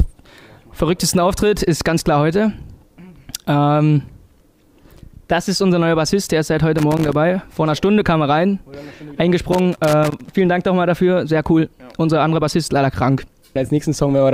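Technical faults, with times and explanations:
6.78–7.15 s and 9.52–10.32 s, loose connector crackle: two irregular bursts of crackle and scratching, the first about 0.38 s long and the second about 0.8 s. A worn or dirty contact in the signal path is making and breaking rapidly as it shifts, so the audio is chopped into fragments. Each break and reconnection of whatever DC sits on the line adds a pop, which together produce the rough, uneven texture.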